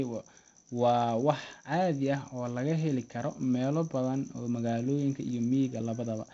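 No technical faults can be heard in this speech. It carries the sound of G.722 wideband telephone coding at 48 kbit/s, with nothing above about 7.8 kHz and a light trace of the codec in the form of faint hiss and slightly roughened detail.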